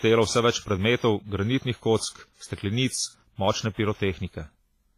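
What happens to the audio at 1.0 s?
At 1.0 s the speech has the same smeared, ringing quality it carries the whole way through, with hiss that swells and fades with the sound and nothing above 15.5 kHz. That points to heavy WMA compression, likely at a low bitrate around 24 kbps, blurring quantisation noise across long blocks.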